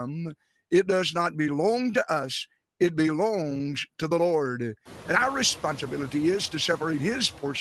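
Noise suppressor artifacts run through the whole clip: the suppressor pulls the bands it treats as steady noise down by about 18 dB, frame by frame, so the background drops between words and swells under them, including after room noise rises around 5 s.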